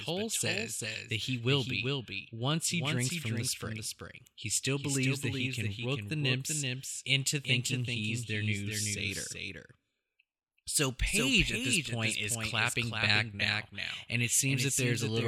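A speech recording carries a doubled audio track for its whole length: a second copy of the same sound runs roughly 0.4 s behind the first, only about 5 dB quieter. The likely cause is the signal being captured twice, once through a slower path, or an edit leaving two copies out of step. Unlike a room echo or reverb, the trailing copy is a single full-band repeat with no decay tail and no room colouration.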